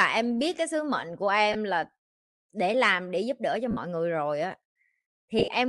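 All the way through, the speech carries a breathy, grainy edge with a noisy haze up top. That's likely Bluetooth LC3 compression, with the upper spectrum thinned out and noise-filled, and the damage is plainly audible. The texture fits a 48 kbps stream with 10 ms frames.

Then come lost LE Audio frames. At 1.53 to 1.56 s, right after "cái sứ mệnh của", about 20 ms smears into noise as the decoder recycles the last spectrum. At 3.71 to 3.77 s, between "để giúp đỡ cho" and "người rồi á", a 60 ms smear fades as the concealment decays. From 5.39 to 5.48 s, several short dropouts scatter across about 100 ms, the longest roughly 30 ms.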